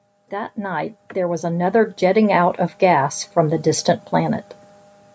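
From 0.3 s to 4.48 s the speech shows automatic gain rising: the gain control judged the microphone input too quiet and kept lifting its level, by about 11 dB over those four seconds. Voice and room noise swell together, so the speaker seems to drift closer while the background grows with them. On a waveform the envelope widens steadily, noise floor included; a spectrogram brightens evenly across the band, which stops at 8 kHz from the call microphone processing.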